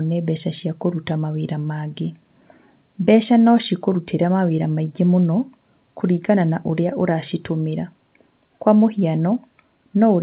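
No technical faults can be heard anywhere in this speech. It comes through a call path working as intended, with nothing above 4 kHz, which fits narrowband G.711 A-law coding.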